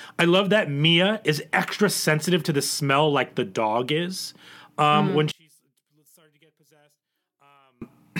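A speech clip in which one channel was likely inverted before the stereo signal was folded to mono, so the material common to both sides cancelled. From 5.32 to 7.82 s the speech and background drop by about 36 dB, leaving only the residual difference between the channels audible.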